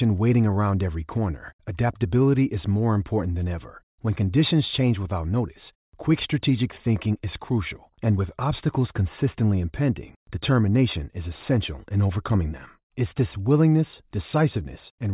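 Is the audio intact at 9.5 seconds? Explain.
Yes, at 9.5 seconds the speech plays through intact, with no dropout, click, distortion or other fault to be heard at that point.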